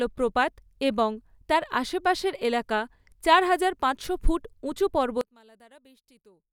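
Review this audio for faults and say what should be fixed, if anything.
From 5.21 s to the end of the clip, just after "হাজার পাঁচশো ফুট উঁচু", the speech collapses by about 29 dB into a faint residue. The likely cause is one channel inverted: with one side's polarity reversed, the content shared by both channels cancels when summed to mono. Unlike a dropout or a gain cut, a faint trace of the difference signal remains rather than silence or an evenly quieter voice. Prevent it by checking polarity and mono compatibility on every stereo path before export.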